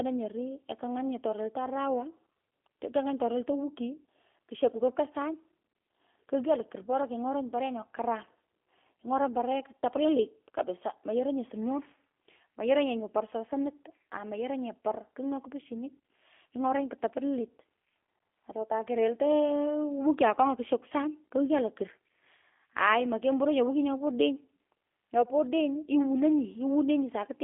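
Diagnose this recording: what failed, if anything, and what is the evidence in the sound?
The fault is in the codec stage: G.729 compression throughout the speech. Nothing reaches above 3.5 kHz, and the band sits between 250 Hz and 3.4 kHz. The rough, synthetic texture points to a low bitrate near 8 kbit/s, where speech is rebuilt from a filter and sparse pulses.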